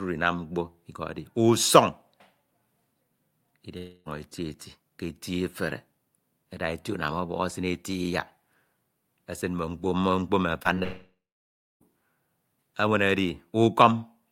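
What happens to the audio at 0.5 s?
Nothing goes wrong at 0.5 s; the speech plays through that moment intact, with no dropout, click or distortion.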